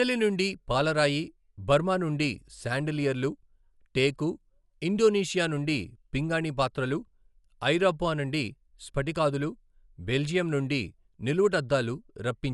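Throughout, the speech sounds dull and rough, with fluttering noise around tones. The likely cause is Dolby Digital compression at a bitrate near 64 kbps, where unfunded lines get dither noise. A spectrogram shows nothing above 11.4 kHz, with speckled noise between harmonics.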